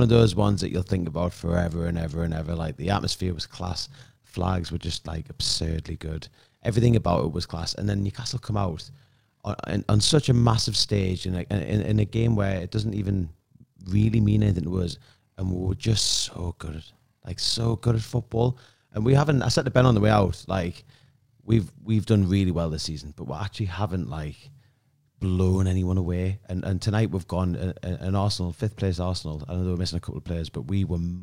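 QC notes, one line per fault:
0.00–21.86 s: overlap-add ripple. The speech carries a fast, rough flutter, a tremolo pulsing around 40 times a second with level swings of about 6 dB. The audio was split into windowed frames and rejoined with overlaps whose gains never sum evenly, so loudness dips once per frame.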